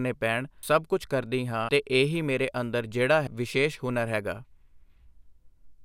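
Compressed frames are skipped at 0.63 s, just before "ਕੁਛ ਕਰਦੀ ਹਾਂ", at 1.68 s before "ਇਹ ਹੀ ਮੇਰੇ ਅੰਦਰ", and at 3.27 s after "ਹੀ ਮੇਰੇ ਅੰਦਰ ਜਿਹੜਾ". Runs of 24 ms frames never reach the output, so the speech jumps ahead by roughly 400, 300 and 200 ms.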